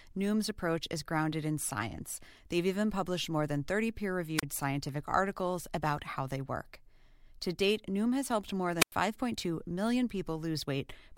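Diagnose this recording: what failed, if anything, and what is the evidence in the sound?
The wireless link failed before the converter, producing wireless microphone squelch dropouts at 4.37 to 4.43 s and 8.78 to 8.92 s. Each time the speech gives way to a brief surge of hiss, then a near-silent hole of about 30 ms and then about 96 ms as the receiver's squelch mutes the faded RF carrier, before the speech returns. That hiss leading into the mute separates this from a network or buffer dropout, where the gap opens cleanly.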